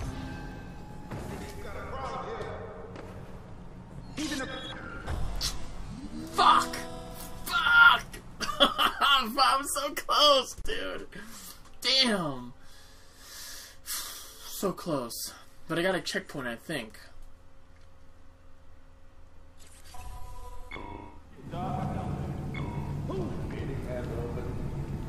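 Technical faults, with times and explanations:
10.62 to 10.65 s, gap at a join of encoded pieces: a silence of about 30 ms opens in the continuous sound with smeared edges. Two separately encoded pieces were joined untrimmed, so the encoder's start-up delay and last-frame padding remained before the sound resumed.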